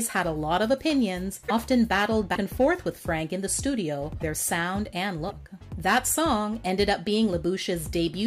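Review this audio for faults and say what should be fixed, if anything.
Broken MP3 bit reservoir at 1.48–1.51, 2.34–2.37, 4.19–4.22 and 5.29–5.32 s: each time the sound jumps ahead with a short glitch lasting about one 26.1 ms frame. The likely cause is dropped frames, leaving the following frame to pull its borrowed reservoir bytes from the wrong frame's data.

To prevent it, make sure no MP3 frames are lost in transfer or editing, or re-encode cleanly from the original source.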